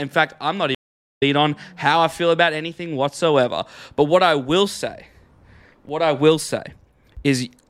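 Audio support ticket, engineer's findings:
Stream reconnect, 0.75 to 1.23 s, after "fact I'm not". Connection dropped, player went silent about 0.44 s, then a new decoder started mid-stream. Resumes roughly 0.4 s further on, at "on how I feel", with the intervening material lost. Waveform: flat gap, then a fade-in ramp. Spectrogram: blank band across all frequencies, then energy reappearing abruptly. Probable component: network transport and player reconnect logic.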